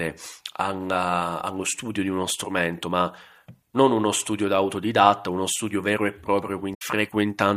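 A speech clip with damaged data in a compressed stream from 6.71 to 6.82 s: a brief chirp or squawk where the decoder misreads corrupt frames and resyncs, unlike a clean dropout's silence.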